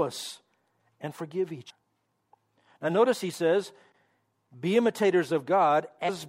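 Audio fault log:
1.69 s and 6.08 s, compressed frames skipped: after "and forgive" roughly 0.4 s of audio vanishes, and later about 0.2 s, consistent with whole 26.1 ms frames being dropped; overlapping neighbouring frames smear each join into a soft blip rather than a click.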